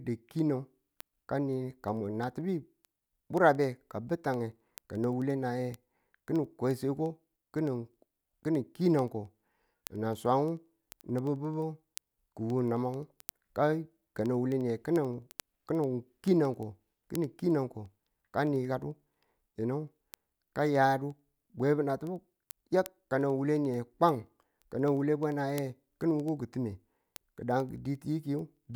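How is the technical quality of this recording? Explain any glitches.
The recording is marred by a constant ticking from start to finish. Word clock ticks run from 0.13 s to 28.74 s, roughly ten per second. The receiving device's clock is off by a few hundred parts per million, so one sample slips at each crossing. Their steady rate, not random crackle or gaps, identifies them.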